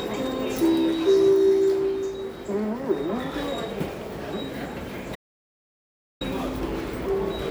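A recording of sounds with an audio dropout to silence from 5.16 to 6.21 s, about 1.05 s lost. The gap is silent with no room tone, unlike a quiet passage or gating, and likely comes from the input briefly disconnecting or muting.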